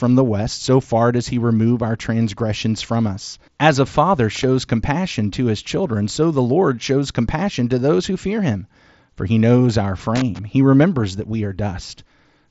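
A worn or dirty contact making and breaking gives loose connector crackle, heard as scratchy bursts at 4.35–4.43 s and 10.16–10.39 s, over audio band-limited near 7.7 kHz by the Bluetooth mSBC headset codec.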